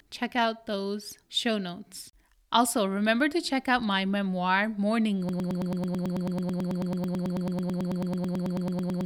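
At 5.29 s the speech locks into a broken-record loop: a 0.11 s fragment repeats 34 times, back to back, to the end, as a rapid stutter. A stalled player or stream is the likely cause. Spectrograms and waveforms show identical 0.11 s blocks tiling.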